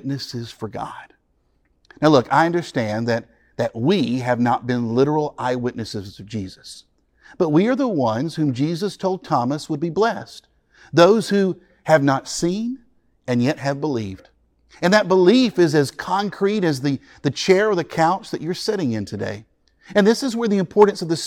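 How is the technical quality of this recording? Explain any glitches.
No technical faults can be heard anywhere in the recording, and the signal stays continuous and steady throughout.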